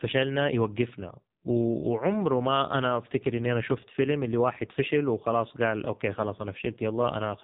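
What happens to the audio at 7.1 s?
At 7.1 s the speech carries the same AMR narrowband mobile codec damage heard across the whole clip. Nothing passes above about 3.8 kHz, so the sound is thin and muffled. The codec rebuilds the voice from a simple vocal-tract model fed by a few pulses per short frame. Here the coding is heavy, and the voice sounds buzzy and synthetic. That fits the codec's low 5.9 kbps mode.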